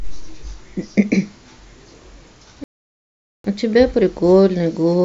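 At 2.64 s the speech cuts to silence for about 0.8 s, resuming at 3.44 s: a playback stall, likely the player starving for data or its thread blocking. The waveform shows a flat gap, and the spectrogram an empty vertical band, between abrupt edges.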